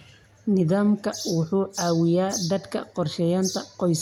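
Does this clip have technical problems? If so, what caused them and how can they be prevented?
No, the speech signal holds steady throughout, with no technical faults to trace or prevent.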